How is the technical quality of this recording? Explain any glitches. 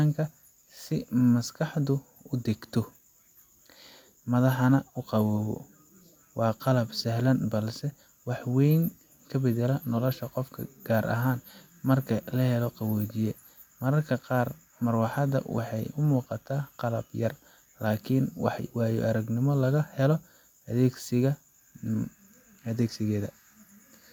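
Nothing technically goes wrong anywhere in this speech recording, so there aren't any glitches to explain.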